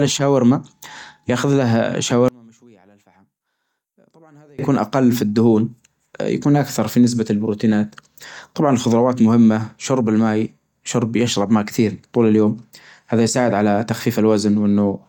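One channel inverted, from 2.28 to 4.59 s: the speech drops by about 32 dB and leaves only a residue. The likely cause is one stereo channel with reversed polarity, so the material common to both channels cancels in the mono sum and only their difference remains.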